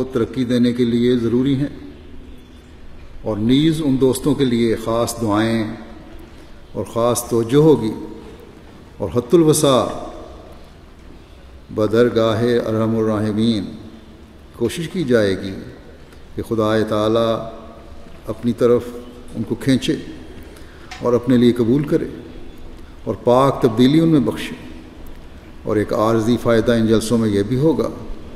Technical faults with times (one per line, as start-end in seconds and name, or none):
0.00-6.00 adaptive stream starting at a low bitrate
11.88-13.09 train of clicks